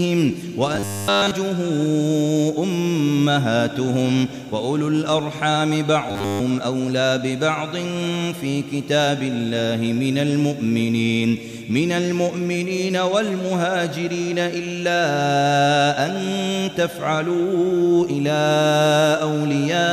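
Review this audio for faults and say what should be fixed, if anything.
Robotic sound from repeated short buffers at 0.75–1.33 s and 6.09–6.40 s: a rigid 100 Hz buzz, likely from a 10 ms buffer replayed throughout. Unlike dropouts, nothing goes silent. Keep audio buffers supplied on time so the software never has to recycle old ones.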